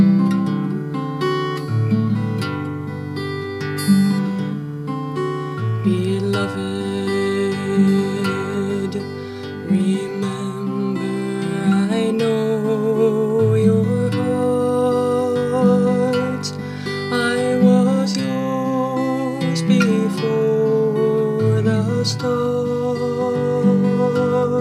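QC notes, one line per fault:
No technical faults were heard anywhere in the signal.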